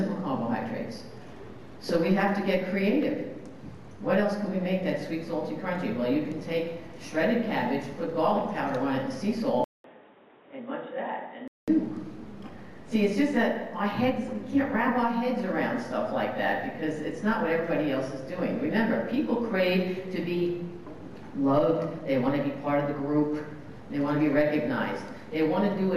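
From 9.64 to 11.68 s the sound turns dull and quieter, nothing above 3.8 kHz, after a 200 ms gap: likely an input switched to a poorer device.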